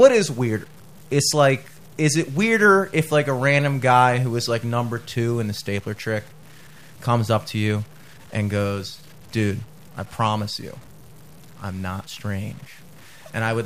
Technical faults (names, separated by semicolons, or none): low bit depth without dither